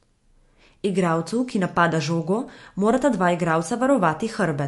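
From start to end the speech has a hard ceiling near 11.3 kHz and a watery, swirling shimmer on s sounds, likely MP3 compression at a rate around 48 kbps. Bits ran short, so faint frequency lines flicker between frames; a plain low-pass filter would dull the treble without that churning.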